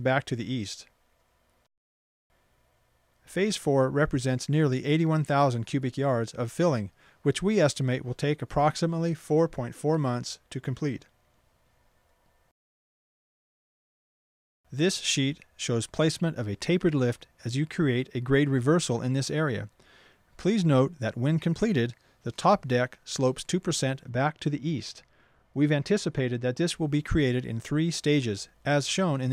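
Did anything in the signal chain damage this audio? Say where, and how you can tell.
Yes. From 24.09 to 26.68 s the treble rolls off smoothly, about 8 dB down at 10 kHz. That's de-emphasis applied wrongly in processing, muffling everything.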